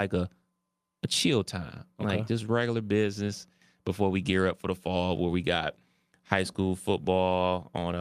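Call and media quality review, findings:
Nothing to flag on this one: the speech comes through without any audible issues from the call or media path.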